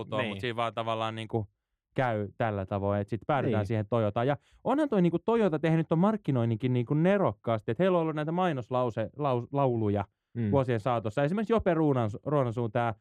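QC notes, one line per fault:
1.30–13.00 s, de-emphasis applied wrongly: from just after "siinä vaan tavallaan niin" the speech turns dull and muffled, as if heard through a cloth, with sibilants and consonant edges softened to the end. A treble cut meant to reverse pre-emphasis has been applied to audio that never had that boost, or applied a second time, so the highs fall away smoothly, about 11 dB down at 10 kHz relative to 1 kHz.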